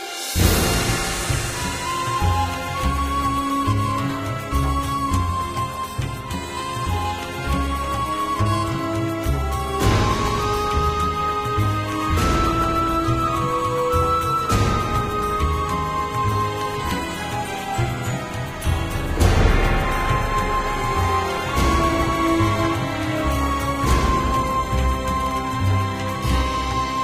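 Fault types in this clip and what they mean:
No audible faults are present anywhere in the audio.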